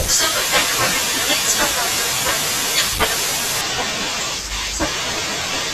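The clip is speech. From 3.61 s to the end, it shows channel delay (comb filtering). One channel arrives late by roughly two samples, a few hundredths of a millisecond. When the two channels are summed to mono, the shared content cancels at evenly spaced frequencies. With so short an offset, the first notch sits high, around 10 kHz. The top end thins out, and the sound turns dull for the rest of the clip.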